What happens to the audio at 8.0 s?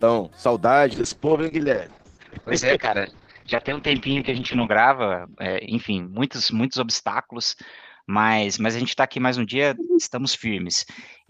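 At 8.0 s you're inside a call bitrate drop running from 0.93 to 11.21 s. The bandwidth estimate collapsed, so the encoder sounds starved, which fits a fall from roughly 40 kbps to around 7 kbps. Coarse coding and a top end capped near 8 kHz leave the sound rough and muffled.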